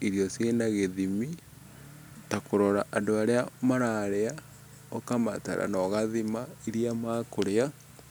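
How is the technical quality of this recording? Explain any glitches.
No glitches can be heard anywhere in the recording, and the speech signal stays steady and intact throughout.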